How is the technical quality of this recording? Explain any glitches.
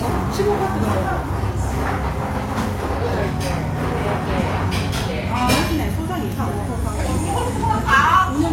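The technical quality is limited by one fault that runs through the whole recording. Nothing is present above 16.3 kHz, and the sound carries the artefacts of heavy data reduction, even though the file itself is a high-bitrate MP3. The likely cause is low-bitrate audio saved at a high bitrate: an earlier encode, pointing to a low-rate codec such as HE-AAC around 32 kbit/s, discarded detail that re-encoding at 320 kbit/s cannot restore. Unlike a plain low-bitrate file, the container promises quality the sound lacks.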